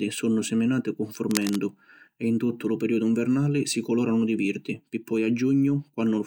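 From 1.30 to 1.58 s, just before "e in tuttu lu", a dense, ragged rustle sits somewhat below the speech: cable scratch noise, likely from a worn connector shifting its contact. Unlike a single click, it is a rapid irregular cluster of crackles that lasts.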